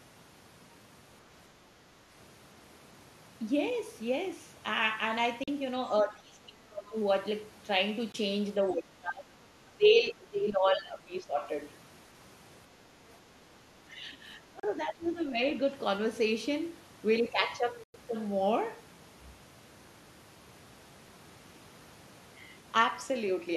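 The speech first breaks at 5.44–5.49 s, where a Bluetooth stall leaves a gap of 41 ms of silence before the sound resumes. This is likely from interference delaying packets until the headphone buffer ran empty. Further stalls cut in at 8.12–8.16 s (18 ms of silence), 14.60–14.65 s (35 ms) and 17.84–17.96 s, the longest at 104 ms.

Between these, speech is suppressed in double talk at 6.03–6.95 s and 8.63–9.46 s, dropping by about 25 dB, then at 9.77–11.46 s and 13.87–15.41 s by about 15 dB. The level sags and partly gates out, likely because the echo canceller, facing simultaneous far-end audio, attenuated everything it could not separate.

At 15.02–15.07 s, inside the last suppressed stretch, the other side's voice leaks through as a brief, faint scrap some 30 dB below the speech, likely loudspeaker echo the canceller left in the microphone signal.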